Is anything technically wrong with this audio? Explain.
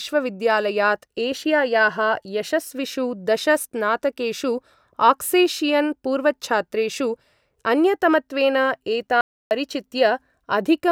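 Yes. At 9.21 to 9.51 s, an audio dropout to silence: input was likely lost while recording continued, so the speech cuts to silence for 0.3 s.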